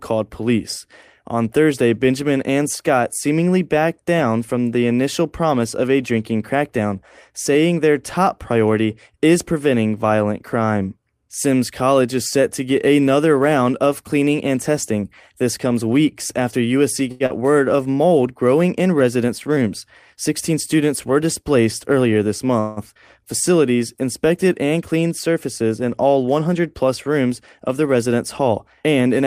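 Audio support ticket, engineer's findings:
Short stall from a late packet, 17.11–17.23 s. Jitter buffer ran dry. The last sound is held for 87 ms with a slight buzz or dip, then resumes at the same point. Nothing lost.

Short concealed packet loss, 17.26–17.33 s. About 60 ms never reached the decoder. Concealment smears a brief 36 ms fill and blends back, so a small fragment is gone.

Jitter buffer slow-down, 17.76–17.96 s, just before "growing in". The receiver repeated pitch periods, adding 44 ms. It plays at 82% speed at unchanged pitch, drawn out.

Jitter buffer speed-up, 19.15–20.55 s, between "growing in" and "students were displaced earlier". Short pitch-period cuts total around a tenth of a second. Runs 106% speed, same pitch, slightly hurried. Again 28.86–29.27 s at 111%, roughly 50 ms removed.

Call audio freeze, 22.60–22.79 s, right after "were displaced earlier this". The last sound continues for 168 ms as a fading buzz or hiss with no silence, then picks up where it stopped. 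Likely packets held up in transit emptying the jitter buffer.

Skip ahead, 22.94–22.98 s. Playback jumps forward with only a 10 ms bridge. Roughly 70 ms dropped, in transit or by a jitter buffer overflow, and the two sides are joined almost directly.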